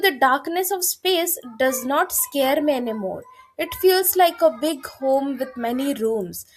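No technical faults are audible.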